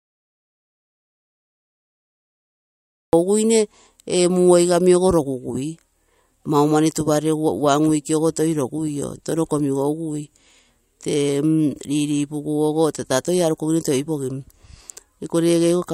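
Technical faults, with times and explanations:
0.00 to 3.13 s, audio dropout to silence: the speech clip opens in complete silence, with no room tone at all, and the speech only arrives at 3.13 s, starting mid-flow. The input was likely lost or muted while the recorder kept writing silence.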